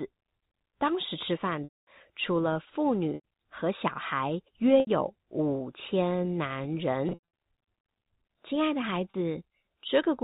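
A held, buzzy tone replaces the sound five times: at 1.64–1.87 s (230 ms lost, fading toward silence before the cross-fade back), 3.15–3.23 s (90 ms), 4.80–4.87 s (70 ms), 7.09–7.19 s (180 ms in short bursts over 240 ms, longest run 90 ms) and 9.11–9.14 s (30 ms). This is packet loss with pitch repetition. Packets went missing, which fits 10 ms packets, and the receiver looped the last pitch period across each gap, fading it out on the longer losses, all over a G.711 telephone path.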